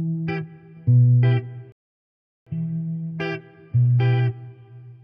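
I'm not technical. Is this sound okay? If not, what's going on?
No. There's a rebuffering stall: the player ran out of downloaded audio before more had arrived, so it stopped and waited. You hear this as the sound cutting to silence at 1.72 s and staying silent until 2.47 s, then carrying on from exactly the point where it stopped. Nothing is skipped or lost, but the pause adds about 0.74 s that wasn't in the original sound.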